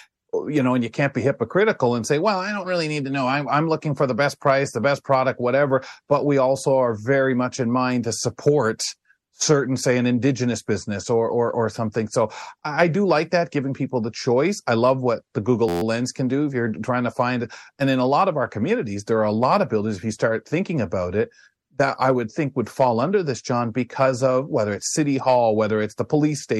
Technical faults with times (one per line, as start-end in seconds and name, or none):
15.69-15.82 system hang loop